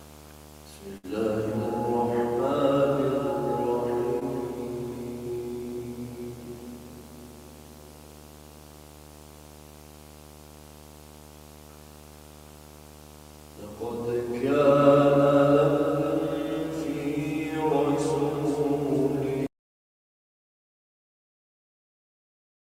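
A display-related video buzz runs under the whole recording: a steady buzz at a 75 Hz field rate, sitting about 20 dB below the programme level, with harsher hash riding above the fundamental. The 75 Hz figure points to a monitor or video cable coupling its refresh-rate energy into the analogue audio path, through shared ground or proximity, rather than mains hum. From 0.97 to 1.05 s there is a burst of packet loss. The receiver carries the last sound forward for roughly 59 ms while steadily attenuating it, so the audio turns into a held, fading continuation instead of moving on. Playback then picks up further along, and about 60 ms of the original material between those points is simply absent, which gives a small jump in continuity. A shorter concealed packet loss occurs at 4.19 to 4.23 s. Here about 16 ms of synthesised continuation covers a hole, and about 20 ms of real audio never arrives in time for the decoder. 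The result is a brief smear or wobble where the concealment is blended back into the genuine signal, and a short transient in that window can be lost outright. At 19.47 s the sound cuts off abruptly to silence and stays there until the end, with no room tone or noise floor remaining. That pattern is an audio dropout to silence, likely caused by the input device disconnecting or being muted while the recorder kept writing silence.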